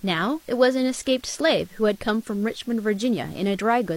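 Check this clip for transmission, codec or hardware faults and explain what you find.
A low bit depth with dither fault runs through the whole speech clip. The signal has been rounded to very few amplitude steps, consistent with about 8 bits, and dither noise was added before rounding. That turns the rounding error into a steady, even hiss sitting roughly 30 dB below the speech, with no grainy distortion on quiet passages. On a spectrogram it shows as a uniform noise floor across all frequencies. In the waveform the pauses never reach silence but carry a constant fuzzy band.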